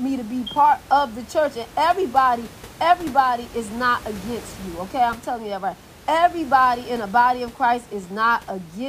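Nothing stood out on listening to this speech clip, with only a faint room noise sitting about 21 dB below the talking.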